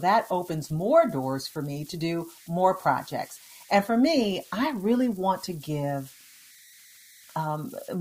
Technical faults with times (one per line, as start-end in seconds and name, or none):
0.00-8.00 converter idle tones